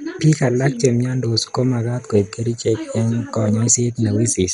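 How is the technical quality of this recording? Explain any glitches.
The quality is poor: MP2 compression is heard throughout the speech. It likely comes from MPEG Layer II coding at a low bitrate, consistent with about 56 kbps. Starved of bits, the encoder switches off upper sub-bands, leaving nothing above 11.2 kHz, and coarsely quantises the rest. The result sounds dull, gurgling and granular. A spectrogram shows a hard ceiling at 11.2 kHz with blocky, flickering bands below it.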